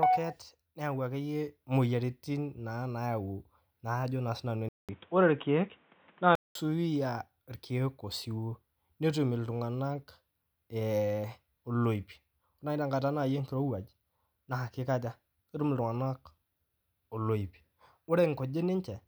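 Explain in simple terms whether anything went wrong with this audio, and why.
Input switched to a poorer device, from 4.69 to 6.55 seconds. The speech goes briefly silent for about a fifth of a second, then turns dull and boxy, with nothing above about 3.8 kHz. The level shifts a little and a faint new background noise appears. This is likely because the recording jumped to a lower-quality microphone or headset mode, which carries a narrower range of sound and its own noise.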